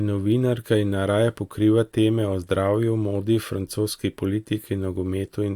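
No technical faults can be heard anywhere in the recording. At no point does anything in the audio stand out as a problem.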